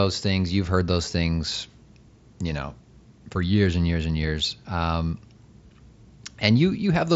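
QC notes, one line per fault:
Speech clip, no faults to report.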